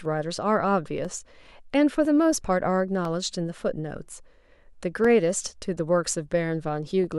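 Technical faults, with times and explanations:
0.05 to 7.04 s, periodic USB or driver dropouts: about seven brief ticks, one each second, where roughly a millisecond of the speech is replaced by silence as the driver stalls. The strict one-second spacing, audible only while sound is present, distinguishes them from random clicks.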